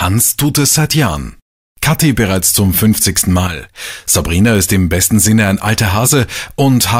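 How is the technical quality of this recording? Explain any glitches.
There is one glitch, a brief one. From 3.47 to 3.63 s, one channel drops out, likely because one side of the stereo feed was lost for that moment. Folded to mono, anything shared by both sides abruptly falls by about 6 dB, and material present only in the missing channel vanishes until it returns.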